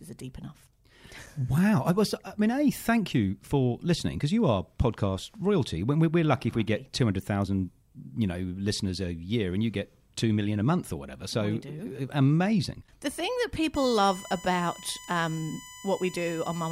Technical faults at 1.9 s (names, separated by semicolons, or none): none